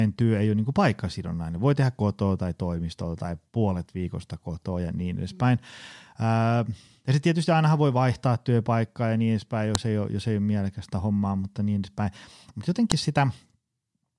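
Separate pieces of this speech recording were joined without stripping their WAV headers, so each file header is played as audio. The few dozen header bytes are read as sample values rather than discarded. The result is a sharp, loud click at 9.75 s and again at 12.92 s, marking where a new piece begins. Each snap lasts only a millisecond or two and cuts across the speech regardless of what is being said at that point.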